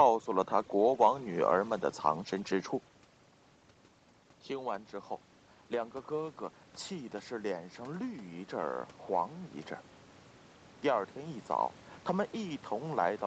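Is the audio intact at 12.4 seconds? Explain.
Yes, at 12.4 seconds the speech is intact, with no dropout, glitch or other fault at that moment.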